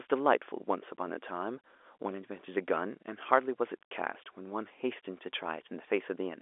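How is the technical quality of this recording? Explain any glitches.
The technical quality of this recording is sound, and there are no glitches to explain.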